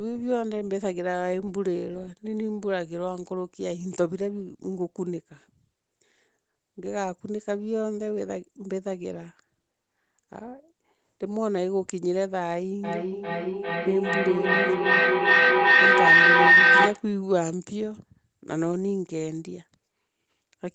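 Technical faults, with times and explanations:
12.84 to 17.11 s, feedback howl: a tone near 2 kHz swells to about 11 dB above the speech, pulsing roughly every 0.4 s. The call's own audio is re-entering a microphone from a nearby loudspeaker, and each trip around that loop adds level instead of losing it, so the repeats narrow onto the frequency the loop favours and climb. The pulse rate reflects the loop's delay, and the howl stops only when the loop is broken, cutting off at 17.11 s.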